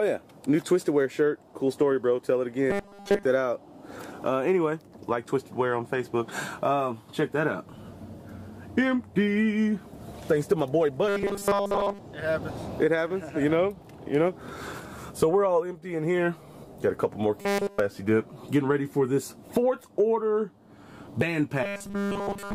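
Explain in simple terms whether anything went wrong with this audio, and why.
Four stretches of robotic sound from repeated short buffers: 2.70 to 3.25 s, 11.08 to 11.99 s, 17.41 to 17.80 s, and 21.63 s to the end. Each turns into a stiff, metallic buzz at a fixed 200 Hz. That pitch matches one tiny 5 ms slice of audio being replayed over and over. In the first two stretches most of the sound is replaced this way; in the last two, all of it is. The likely cause is new audio arriving too slowly, so the software repeats what it already has.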